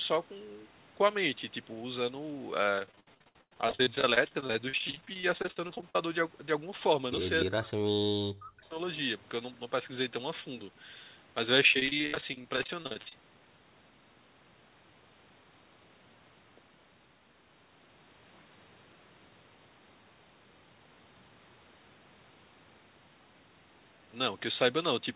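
From 2.76 to 5.95 s the sound turns choppy, with pieces dropping out. That is repeated packet loss: dozens of short holes, the longest 100 ms, each patched by stretching the preceding sound, so about a third of the span is filled-in audio. The same robotic chopping returns from 11.72 to 13.12 s, with gaps up to 67 ms and again about a third concealed.

Between 7.44 and 8.76 s the level repeatedly sinks, in places by roughly 40 dB, so the talker nearly vanishes for about a second in total. The likely cause is speech suppressed in double talk, where the echo canceller, unable to tell this talker from loudspeaker echo while both sides spoke, turned everything down. Throughout, the band stops at 4 kHz, which fits a narrowband G.711 call codec.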